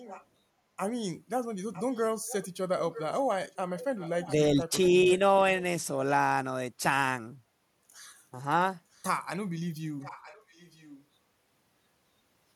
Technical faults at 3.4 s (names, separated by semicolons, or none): echo leak